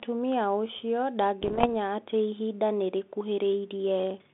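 From about 1.41 to 1.67 s, just before "atĩ ihinda nĩ", there's a run of bit errors on an ADPCM link. Flipped bits knock the decoder's step size and predictor off track, so you get pops and rough, level-jumping bursts. The density sounds like roughly one bit in a hundred, over a narrowband line that fits 32 kbit/s G.726.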